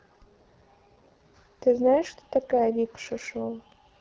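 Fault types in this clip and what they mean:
AMR wideband (HD Voice) codec: the speech is coded up to 6.4 kHz by a pulse-excited vocal tract model, with only synthetic noise filling the band up to 7 kHz. At what sounds like one of the lowest rates, around 8.85 kbit/s, it comes out rough and raspy. A spectrogram shows smeared harmonics, nothing above 7 kHz, and a noisy, structureless top band.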